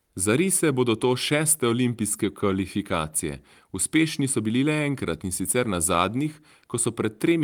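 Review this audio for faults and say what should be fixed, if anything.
Nothing to fix; no faults found in this speech clip.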